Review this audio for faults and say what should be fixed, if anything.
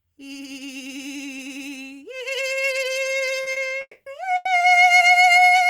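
Short stall from a late packet: at 3.43–3.49 s, 3.52–3.68 s and 4.36–4.48 s, packets arrived late and the jitter buffer ran dry, so the receiver held the last sound for about 30, 40 and 90 ms before resuming the music where it left off. Nothing is lost, but a moment of the music hangs with a faint buzz or dip.

Call audio freeze: from 3.81 to 4.09 s, the jitter buffer emptied, likely because packets were held up in transit. The music stops and is replaced by about 250 ms of fill, a fading buzz or hiss that ends in roughly 60 ms of silence. It then resumes where it broke off.

A deeper adaptive jitter buffer, together with network prioritisation that reduces delay spikes, would keep packets on hand through these gaps.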